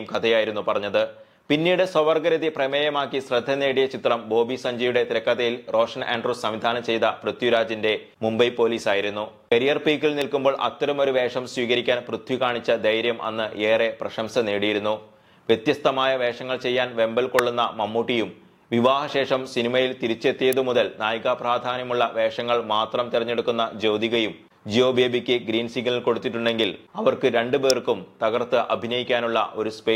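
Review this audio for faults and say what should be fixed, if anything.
There are four sharp snaps sitting on top of the sound, at 10.21, 17.39, 20.53 and 27.70 s, each over in a few milliseconds. They sound like an electrical switching spike, likely a nearby switch, motor or static discharge arcing briefly and the audio line picking it up. The one at 10.21 s is the quietest. To prevent it, keep switched loads and motors away from the audio cabling and use balanced, shielded runs.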